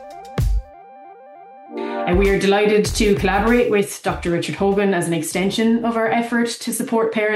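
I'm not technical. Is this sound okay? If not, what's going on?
Yes, this sound is okay, and nothing is going wrong with it.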